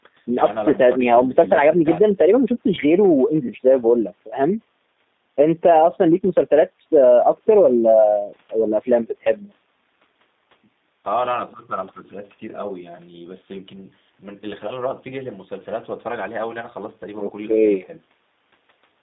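Throughout, the speech shows plainly audible G.729 codec damage. Rebuilt from a vocal-tract model and sparse pulses, it sounds rough and synthetic, confined to 200 Hz to 3.7 kHz, consistent with 8 kbit/s.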